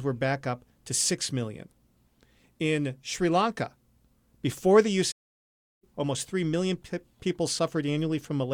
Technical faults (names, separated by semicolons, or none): playback stall